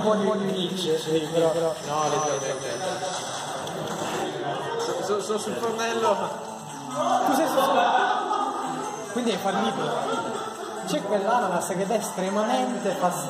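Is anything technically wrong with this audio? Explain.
Yes. From the very start until 4.22 s there's a doubled audio track: a second full-band copy trails about 200 ms behind, a few dB quieter, with no room tail. Likely a slower capture path mixed back in. It stops abruptly at 4.22 s.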